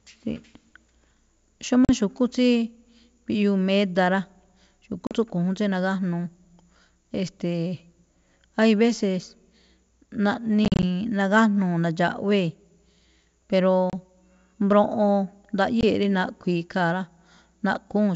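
Packet loss on an ADPCM call cuts hard silent holes at 1.85, 5.07, 10.65 to 10.84, 13.90 and 15.81 s. After each, the desynchronised decoder resumes slightly distorted.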